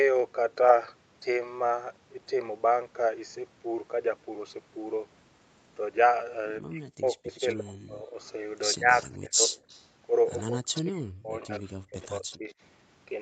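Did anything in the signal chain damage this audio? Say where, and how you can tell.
Yes. Speech suppressed in double talk appears at 6.61–8.16 s, 8.75–9.56 s and 10.44–12.53 s. The speech dips hard, by up to about 40 dB, then about 25 dB, then about 40 dB. The stage is call processing. An echo canceller likely ducked the near talker along with the loudspeaker echo while the two overlapped.

An echo leak sits in the same call processing stage. A faint delayed copy of the speech returns at 7.28–7.54 s and 8.93–9.05 s, 105 ms late. It returns again at 9.68–10.82 s and 11.52–12.54 s, 76 ms late. It runs about 15 to 25 dB below the speech. Loudspeaker pickup likely slipped past the echo canceller.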